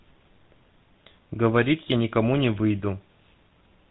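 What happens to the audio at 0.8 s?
At 0.8 s the speech carries the GSM full-rate codec damage that runs through the whole clip, with the same plainly audible buzzy, gravelly roughness. The codec rebuilds the voice from a vocal-tract model excited by evenly spaced pulses, dropping two of every three excitation samples, which fits a 13 kbps phone-grade rate. On a spectrogram the energy stops abruptly at 4 kHz, and the harmonics below look smeared and grainy rather than clean.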